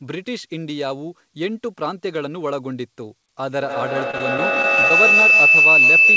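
At 3.61 s a feedback howl begins: a second device in the room feeds the loudspeaker's output back into the microphone, and the loop gains level on every trip. The sound narrows to a piercing tone around 3 kHz, with the loop repeating about every 150 ms and peaking about 10 dB above the speech, and it persists to the end.

From 4.11 s to 4.91 s, under the howl, packets are lost repeatedly in a run of short gaps, the longest 22 ms, each patched by stretching the previous sound. About 12% of that stretch is concealed, so the audio turns choppy and robotic, with fragments missing.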